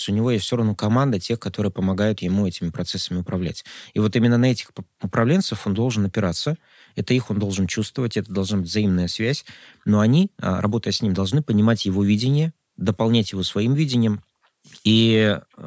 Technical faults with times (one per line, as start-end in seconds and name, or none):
none